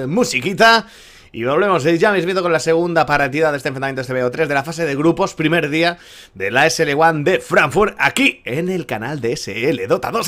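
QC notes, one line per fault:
7.58 to 8.28 s, hard clipping. For about 0.7 s the signal runs roughly 4 dB past what the stage can pass. The peaks hit the ceiling and are sliced flat. Those flat tops are not part of the original waveform. They add harmonics high in the spectrum. The result is a gritty crackle riding on the loudest moments of the passage. The rest of the passage keeps its shape.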